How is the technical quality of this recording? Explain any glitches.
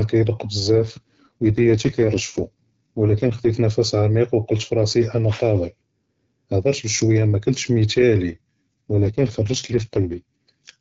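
The speech passes through an AMR wideband (HD Voice) codec, with light codec damage, and it twice suffers an AMR rate drop. From 0.68 to 3.50 s, and again from 8.26 to 10.78 s, the voice turns rough and synthetic without any gap or band loss. The network cut the codec rate to protect weak-link bits, which fits a drop from 12.65 to 6.6 kbit/s.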